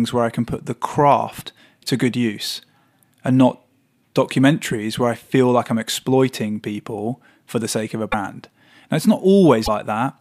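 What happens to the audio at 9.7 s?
A broken MP3 bit reservoir is the likely cause of the fault from 9.65 to 9.68 s. The speech briefly breaks and skips forward for about 30 ms, close to a single 26.1 ms MP3 frame. Frames appear to be missing just before this point. The next frame reaches back into the shared reserve for bits it had parked in earlier frames and decodes bytes that belonged to different data. The result is a brief corrupted break before clean decoding resumes.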